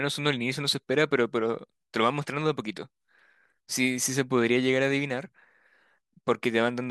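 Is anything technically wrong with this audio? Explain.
No, nothing is technically wrong with this audio.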